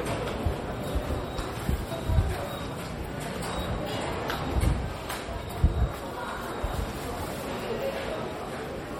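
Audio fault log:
Throughout, MP3 compression artefacts. Plainly audible damage, with faint detail that seems to flicker in and out. The likely cause is a low-bitrate MP3 encode, around 48 kbps, dropping weak frequency components frame by frame. The treble still extends to 20 kHz.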